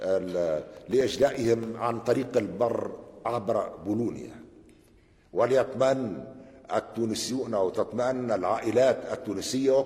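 From 0.72 to 1.68 s there's processor overload crackle: the CPU keeps missing deadlines on tiny buffers, a millisecond or two each, leaving a few dozen silent gaps that grind together into gritty tearing. Then at 4.70 s it jumps, with no gap, to an adaptive stream at a lower bitrate. It sounds like AAC dropping to a low-rate HE-AAC version; the treble drops, nothing above 14.9 kHz survives, and that holds to the end.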